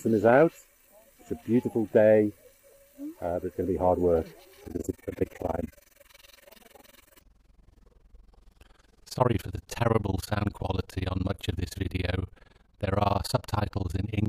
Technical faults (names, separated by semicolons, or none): overlap-add ripple